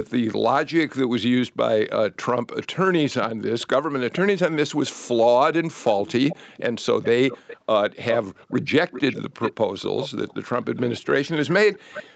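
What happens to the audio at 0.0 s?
Nothing goes wrong at 0.0 s: the speech is intact there, carrying only the ordinary band limit of the call path, with nothing above about 8 kHz.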